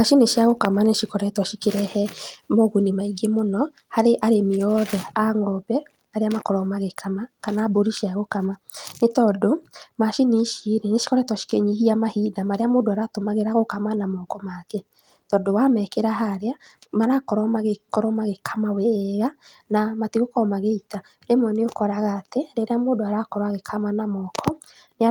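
No technical faults are audible anywhere in the recording.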